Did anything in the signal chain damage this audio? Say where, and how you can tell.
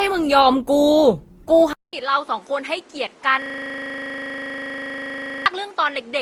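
Yes. At the codec stage, generation loss runs through the whole clip, likely from the audio being decoded and re-encoded around five times, which fits repeated Opus passes near 48 kbit/s. Each pass requantises on a shifted frame grid, so the speech sounds swirly, hollow and smeared, with blurred attacks.

At 1.73 s the input switched to a poorer device, likely a different microphone or headset profile. A 0.2 s silence marks the switch. After it nothing reaches above 11 kHz, the level drops by about 5 dB, and a new noise floor sits about 30 dB below the speech.

From 3.42 s to 5.46 s a system hang loop shows up at the driver and buffer stage. The host stalled while the hardware kept replaying one 40 ms piece of its ring buffer, roughly fifty times over, so the speech turns into a steady 25 Hz buzz.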